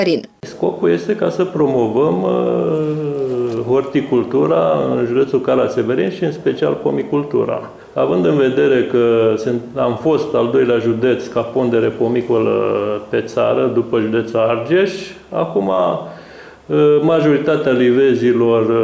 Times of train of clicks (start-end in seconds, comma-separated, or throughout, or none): none